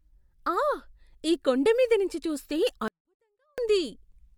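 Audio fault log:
2.88–3.58 s, 24-bit alignment error (too quiet): right after "ఈ కొండమీద నుంచి చూస్తే", samples written as 24-bit integers in the low bytes of 32-bit words are read as full 32-bit integers, so every value lands 8 bits too low in the word. That scales the signal down by about 48 dB, and the speech drops abruptly to a faint, almost inaudible trace for 0.7 s while remaining undistorted, then returns at full level.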